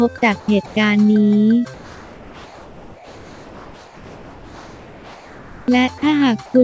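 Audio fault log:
0.40–0.48 s, 0.66–0.76 s, 1.74–5.68 s and 6.46–6.54 s: comfort noise in place of the background. Pauses become steady, featureless hiss, about 1 to 4 dB quieter. Likely discontinuous transmission, with the receiver filling the gaps with synthetic noise.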